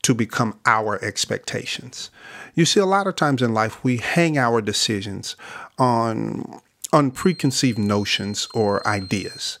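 A speech recording with a feedback whistle from 7.11 s to the end of the clip. A thin, steady tone at 4.2 kHz sits under the speech, roughly 20 dB below it, swelling and fading slowly in level without building up. The likely cause is a loudspeaker-to-microphone loop held just at the edge of feedback, so that one high frequency keeps recirculating and ringing on rather than growing into a full howl.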